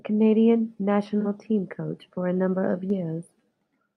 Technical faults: AAC frame loss with concealment

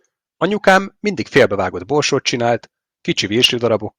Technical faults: hard clipping

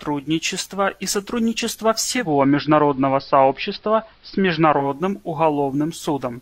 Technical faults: digital radio blending to analogue

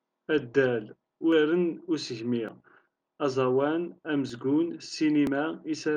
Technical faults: dropped buffer (overrun)

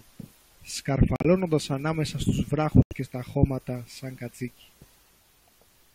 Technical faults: corrupt frame muted

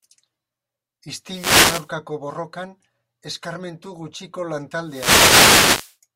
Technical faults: wireless microphone noise hit

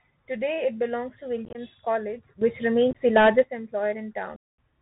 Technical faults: Bluetooth CVSD headset codec; unconcealed Bluetooth headset packet loss; sudden gain jump

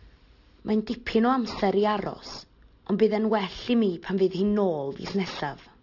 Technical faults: aliasing

